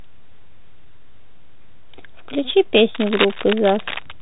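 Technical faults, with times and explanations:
Throughout: Bluetooth CVSD headset codec. Nothing above 3.8 kHz survives, sibilants sound scratchy, and granular hiss sits under the speech, consistent with 64 kbps one-bit delta coding.
2.95–4.12 s: cable scratch noise. Dense, uneven crackling bursts nearly as loud as the speech, likely from a worn cable or connector changing contact resistance when moved.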